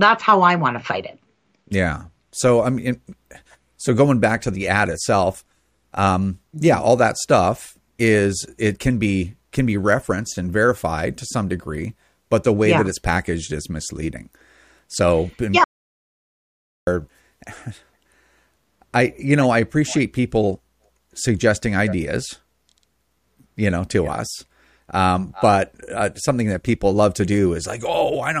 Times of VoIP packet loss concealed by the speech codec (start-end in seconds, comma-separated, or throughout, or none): none